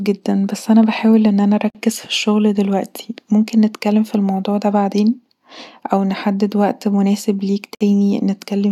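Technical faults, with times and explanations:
1.70–1.75 s and 7.75–7.81 s, gap at a join of encoded pieces: the speech drops out for 47 ms, then 59 ms, six seconds apart, so separately encoded chunks were butted together untrimmed, keeping each one's startup delay and last-frame padding. Edges are smeared by the codec, and the speech resumes where it stopped.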